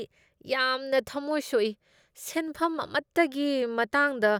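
Nothing in this recording stands out as a technical problem; the speech just runs along without any glitch or hiccup catching the ear.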